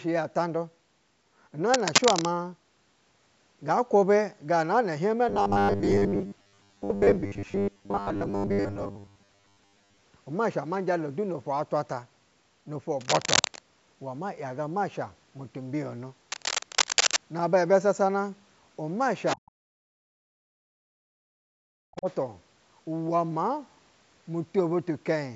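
From 1.74 to 2.25 s a dense, uneven scratching sits over the speech, at times about 5 dB above it. This is cable scratch noise, likely from a worn cable, connector or control being moved so that its contact resistance jumps rapidly. The same rustling bursts return from 13.01 to 13.59 s and from 16.30 to 17.17 s, roughly level with the speech, each lasting about half a second to nearly a second.

Between 5.29 and 10.03 s the speech turns into a rigid, metallic buzz pitched at 100 Hz. It still loosely follows the speech contour. This is robotic sound from repeated short buffers. New audio likely arrived too seldom, and the gaps were filled by looping the last 10 ms, which gives the fixed 100 Hz pitch. Most of the audio in that stretch is repeated material, with the real signal skipped.

At 19.26 to 19.51 s a second voice leaks through about 10 dB below the talker. This is the other side's voice leaking through, likely loudspeaker playback that the echo canceller failed to remove from the microphone. 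A fainter scrap returns from 21.96 to 22.14 s, around 30 dB down.

Around that leak, the talker's speech is pushed down in pieces at 19.36–19.45, 19.69–20.36, 20.75–21.06 and 21.34–22.07 s. At its deepest, each dip drops about 40 dB, close to a cut-out. This is speech suppressed in double talk. With both sides active at once, the echo canceller likely could not tell the talker from the echo and attenuated everything. The lowest bass is missing, as expected from call microphone processing.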